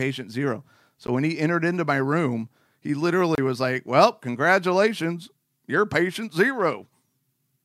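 At 1.07 s, just before "when he entered into", the speech drops to a 10 ms block of digital silence. At 3.35 to 3.38 s, after "into my room he", a 28 ms gap follows. Samples were zeroed, likely from an unfilled output buffer. The sound cuts out and back with no fade, and the first gap, being under 15 ms, is heard as a tick or dip rather than silence.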